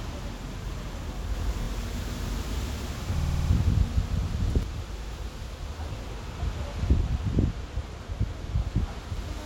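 From 1.34 to 4.63 s there's a doubled audio track: a dry copy at roughly equal level trails about 150 ms behind, likely from a slower capture path, and it starts and stops abruptly. Repeated frames cause stutters at 1.61, 3.18, 5.03 and 8.45 s, where chunks of 26 to 78 ms replay. The one at 3.18 s loops six extra times and adds about 0.31 s.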